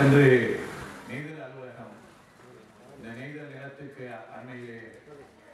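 From 0.28 to 1.3 s there's zipper noise: the level drops by roughly 25 dB in unsmoothed 2 dB steps, around ten a second, each leaving a little click, so it ticks audibly.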